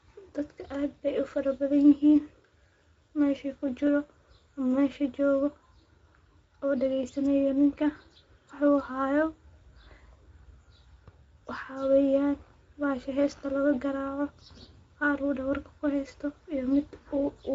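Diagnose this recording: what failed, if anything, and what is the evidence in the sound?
Speex codec damage runs throughout the speech, from start to finish, so the failure sits at the codec stage. Nothing reaches above 7.7 kHz, the ceiling of a wideband speech coder, and the voice carries a plainly audible noisy, hoarse texture. That roughness comes from the CELP excitation being coded with too few bits to rebuild the waveform cleanly, which fits a middle-quality Speex mode at around 17 kbps.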